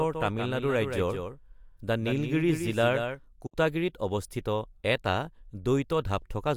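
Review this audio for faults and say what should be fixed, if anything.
From the very start to 3.22 s there's a doubled audio track: a second copy of the speech sits roughly 150 ms behind, about 5 dB quieter, with no room colour, likely a second capture path mixed in.

At 3.46 to 3.54 s there's a digital broadcast dropout, a quick 8 ms fade into a 64 ms hole, which fits about two lost frames, before "অৱস্থিত এটা".

Mute the duplicate input feeding the mix, and strengthen the reception or error protection on the broadcast link.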